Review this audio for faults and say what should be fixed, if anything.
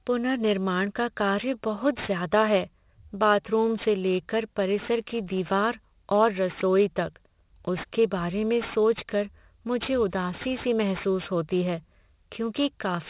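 Aliasing runs through the whole speech clip. The sample rate was reduced, which fits a conversion to 8 kHz, without an anti-alias filter, so content above 4 kHz folds back into the band as gritty, metallic sibilance roughly 20 dB below the speech. To prevent it, low-pass filter below 4 kHz before downsampling, or use a proper resampler.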